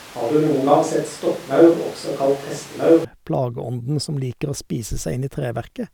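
A switch to a distant microphone runs from the very start of the speech until 3.04 s, when the sound abruptly snaps back to a close, full tone. Before that point the speech is roomy and hollow, thin in the bass, with background noise sitting roughly 25 dB below it, though its loudness barely differs from what follows. The likely cause is that the close microphone's signal was missing, leaving a pickup placed further from the talker.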